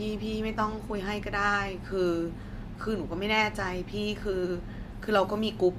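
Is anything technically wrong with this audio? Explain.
No, nothing is technically wrong with this speech clip. A careful listen turns up no technical fault at any point.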